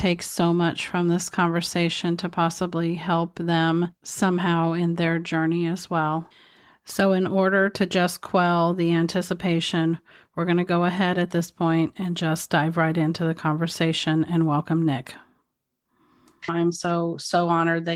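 No audible technical faults anywhere in this speech recording.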